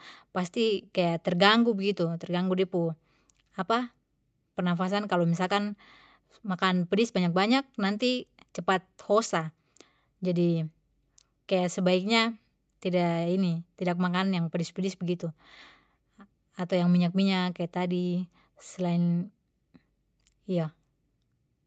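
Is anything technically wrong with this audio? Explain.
No, nothing's wrong here: the speech has come through an ordinary call path, and the top end stopping at about 8 kHz is simply the bandwidth you'd expect from a call codec working as intended.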